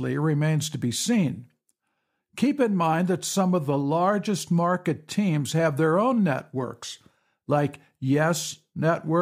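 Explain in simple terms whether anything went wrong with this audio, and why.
Nothing went wrong here: the speech recording carries no audible technical fault anywhere along its run.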